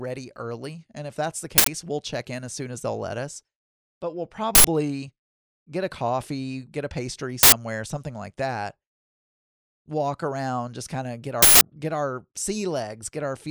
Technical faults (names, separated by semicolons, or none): uninitialised buffer